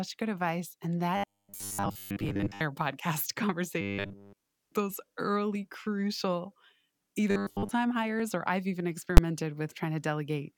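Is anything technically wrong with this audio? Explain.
Yes, the speech has three kinds of fault.

Clock drift buffer slips run from 0.27 s to about 8.2 s, ending just before "or I've even". About four clicks arrive at a steady 2.65 s spacing. The likely cause is two devices whose clocks disagree by roughly 150 ppm, so the buffer between them drifts until roughly 15 samples are dropped or repeated. The even spacing and small size set these apart from the single full-scale bang later.

Robotic sound from repeated short buffers occurs at 1.17–2.62 s, 3.81–4.37 s and 7.31–7.71 s. The speech becomes a rigid, metallic buzz at 100 Hz that still loosely tracks the syllables. This is likely because new audio was arriving too seldom, and the software filled the gaps by looping the last 10 ms. That looping replaced most of the audio in the first and third stretches and all of it in the second. It differs from the slips because it is a sustained tonal drone rather than isolated clicks.

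Invalid numbers at full scale hit at 9.17 s, just after "or I've even". A calculation produced infinite or invalid values, and the output was pinned at maximum level for a 10 ms block. Because the block is so short, the start and end pops merge into one very loud bang. That sheer level distinguishes it from the drift slips.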